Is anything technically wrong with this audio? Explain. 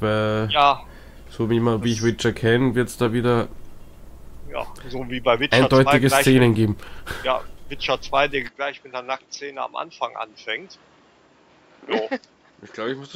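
Yes. From 8.48 s to the end, the sound turns duller and drops roughly 5 dB, with nothing above 7.6 kHz and a faint new background noise. There's no gap at the change, which most likely comes from the input switching to a poorer device with a narrower band.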